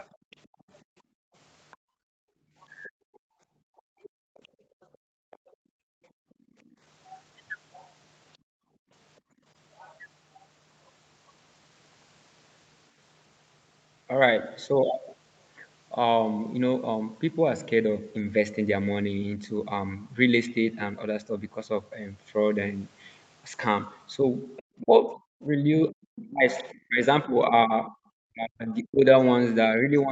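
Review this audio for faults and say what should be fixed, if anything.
From 0.0 to 6.75 s and again from 24.57 to 25.91 s a second voice sits faintly under the speech, roughly 30 dB and then 25 dB below it. This is most likely the other side's voice leaking through: the loudspeaker's output reached the microphone and the echo canceller left a residue. On a spectrogram it appears as a weak, separate harmonic pattern that doesn't follow the main talker. Better canceller convergence, or a headset, would prevent it.

The background is gated by the echo canceller from 0.15 to 6.57 s, about five seconds in total, and from 8.38 to 9.45 s. The canceller clamps the microphone while the far end plays, so the room tone drops by up to about 37 dB and then returns. The waveform shows the noise floor falling to near silence in blocks. Gentler suppression with comfort-noise fill would prevent it.

Speech is suppressed in double talk at 2.87 to 2.93 s, a dip of roughly 30 dB, and again from 24.8 s to the end at 30.11 s, where it reaches roughly 40 dB. 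Both sides are talking, and the canceller likely mistakes the talker for echo and turns everything down. The result is a dip in the talker's level, seen as notches in the waveform envelope. A double-talk detector that keeps the near-end talker at full level would prevent it.

Over the whole clip nothing reaches above 8 kHz, as expected from the call's audio bandwidth.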